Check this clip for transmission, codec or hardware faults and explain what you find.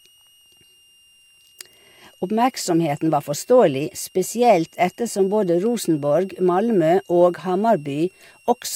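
One hardware fault runs through the whole clip: a switching supply whistle sits under the speech from start to finish. A nearby switching power supply is cycling at an audible rate, either in burst mode or beating against a second converter, and its ripple leaks into the audio path. It comes through as a thin, high whistle, wandering between about 2.73 and 2.86 kHz as the load shifts, roughly 35 dB below the speech.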